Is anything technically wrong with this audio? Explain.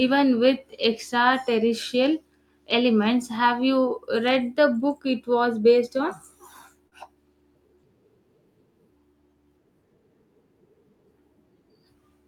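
Yes. At 6.87 to 6.94 s there is short concealed packet loss. About 40 ms of the speech never reached the decoder in time, so the receiver extended the preceding sound to fill the gap and then blended back, leaving a brief smeared, wobbly patch.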